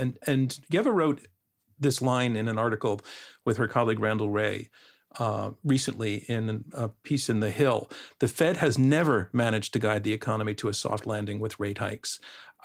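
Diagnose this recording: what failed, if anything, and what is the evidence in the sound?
Nothing failed in this recording, and the sound gives no evidence of any failure.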